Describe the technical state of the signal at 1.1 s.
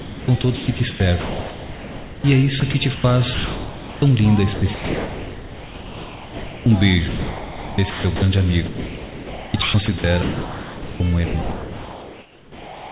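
At 1.1 s the sender's voice detector is likely toggling transmission on and off, causing sound chopped by the voice detector from 0.0 to 2.24 s. About 1.58 s is replaced by comfort noise, so the sound breaks up into holes.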